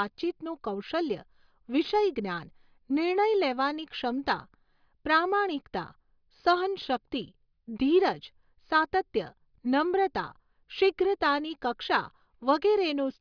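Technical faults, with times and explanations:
Nothing stood out as a technical problem on listening to this speech recording.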